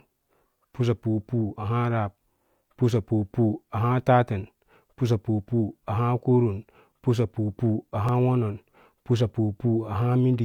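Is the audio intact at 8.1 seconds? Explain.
No. An overlap between stream segments removes about 26 ms from 8.09 to 8.11 s. Doubled timestamps made the player discard real sound. A tiny skip precedes "wonon pusapu".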